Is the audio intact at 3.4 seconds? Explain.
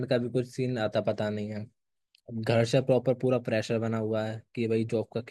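Yes, the speech at 3.4 seconds plays through intact, with no dropout, click or other fault at that moment.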